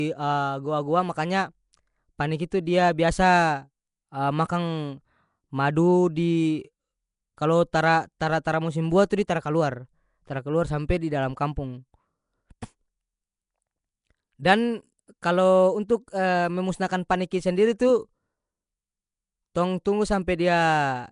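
A rough, hissy halo surrounds the speech from start to finish, with a smeared, underwater quality and nothing above 10.6 kHz. The likely cause is Nellymoser compression, fitting a 44 kbps stream: too few bits reach weak bands, so they are filled with noise.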